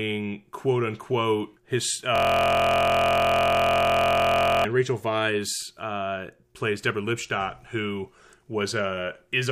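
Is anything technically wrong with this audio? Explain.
Yes. From 2.16 to 4.65 s, just after "quote unquote his", there is a system hang loop. The driver froze while the audio hardware kept replaying one 23 ms slice, which fits a 1024-sample buffer. Repeated over a hundred times, it becomes a steady 43 Hz buzz.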